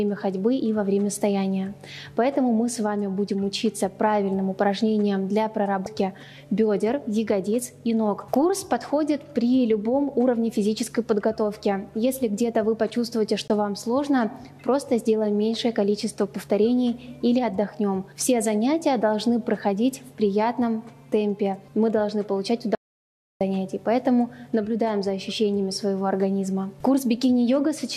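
At 5.83 to 5.87 s the audio gives a brief glitch: damaged data in a compressed stream. The decoder misread corrupted frames and resynchronised on the next header. At 13.48 to 13.50 s a block of digital silence lasting about 21 ms (consistent with a 1024-sample buffer at 48 kHz) cuts in, probably because the buffer was not filled in time and was zero-filled. It is heard as a short hole with abrupt edges. From 22.75 to 23.41 s an audio dropout to silence removes about 657 ms. The sound stops mid-flow and returns with no room tone in between, most likely because the input was lost while the recorder kept writing zeros. Its length and mid-flow cut set it apart from the brief buffer gap.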